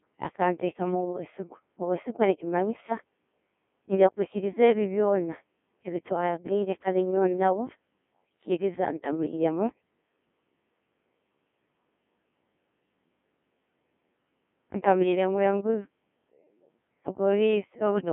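Codec 2 vocoder damage runs from start to finish: the speech has been reduced to pitch, voicing, energy and a coarse spectral envelope, then rebuilt from sine waves, so the original waveform is gone. The result is heavily robotic and buzzy, with a smeared, synthetic quality that fits a 1.6 kbit/s mode. The band sits roughly between 200 Hz and 3.4 kHz, and nothing at all remains above 3.7 kHz.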